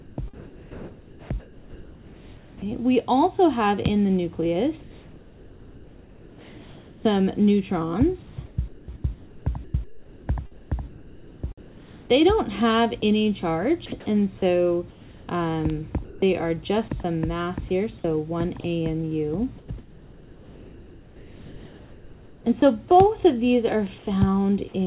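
From 0.0 to 2.65 s, 4.80 to 13.02 s and 14.90 to 16.22 s, transmission likely paused under discontinuous transmission, so comfort noise replaced the real background: a flat, featureless hiss. The call path carries nothing above 4 kHz, which fits G.711 at 64 kbps. At 13.00 s, the voice detector dropped a sound, likely misjudging it as background, and a brief patch of comfort noise fills the gap. From 18.60 to 22.62 s, the detector likely toggled repeatedly, so the sound is chopped by the voice detector: the sound is broken by two or more holes. At 23.98 s, a short comfort-noise fill sits about 5 dB below the real background, which itself lies about 22 dB under the loud passages.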